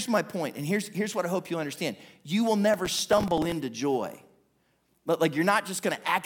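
From 2.74 to 3.52 s the speech picks up a burst of processor overload crackle. Buffers of a few milliseconds keep missing their deadlines, about twenty of them, and each gap gets filled with stale audio. The hard edges stack into a gritty tearing that clears once the load drops.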